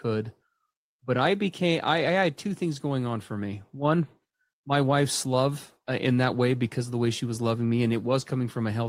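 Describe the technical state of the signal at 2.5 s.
At 2.5 s the speech signal is intact, with no audible technical fault at that moment.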